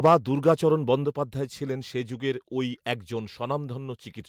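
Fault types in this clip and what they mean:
Microphone overload: right at the start, from 0.05 to 0.15 s, the loudest bit turns harsh and crackly. The peaks push about 4 dB past the ceiling and around a tenth of the samples get their tops flattened. Likely the input gain was set too hot for the converter.
Microphone volume stepped down: the level drops abruptly twice, first by about 2 dB at 0.06 s, right inside that distorted peak, then by about 4 dB at 1.05 s. Voice and background fall together, so it's likely the call software pulling the mic's input gain down in steps.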